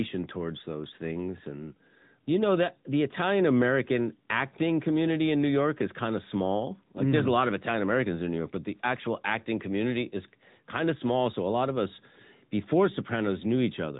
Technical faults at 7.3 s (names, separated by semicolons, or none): AMR narrowband mobile codec